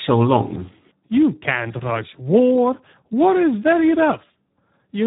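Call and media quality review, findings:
Speex codec throughout, whole clip. Speech encoded at a low quality setting, consistent with roughly 8 kbps narrowband Speex. Too few bits for the CELP excitation, so the speech comes out hoarse and noisy. Heavy coding damage. Band ends near 3.8 kHz with nothing above, which fits narrowband operation. Check the encoder's quality or mode setting on the sending side.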